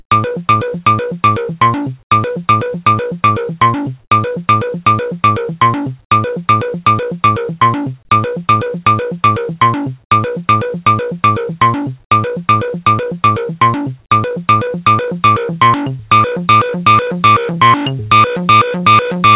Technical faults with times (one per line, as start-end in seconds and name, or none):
0.00-0.11 comfort noise in place of the background